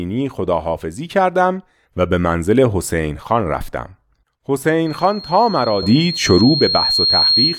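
A microphone in this speech recording is picking up the loudspeaker it feeds, and at one frequency the gain around that loop has risen above one, producing loudspeaker feedback squeal. From 4.86 s to the end of the clip at 7.58 s, a single 4.2 kHz tone swells over roughly two seconds into a piercing whistle that settles a few decibels louder than the speech. The loop is never broken, so the squeal runs to the end.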